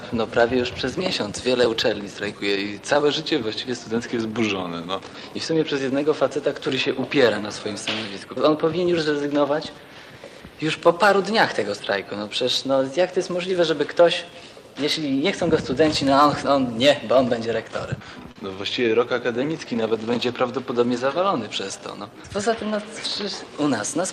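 At 18.31–18.38 s, short concealed packet loss: 40 ms lost, patched from the prior sound. It is a brief smear, visible as a blurred, repeated spectrogram patch.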